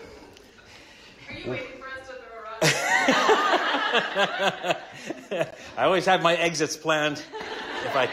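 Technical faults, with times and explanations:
5.51 s, gap between stream segments: a hard-edged 19 ms silent hole where two 4-second segments' time stamps don't meet, so the player pads silence.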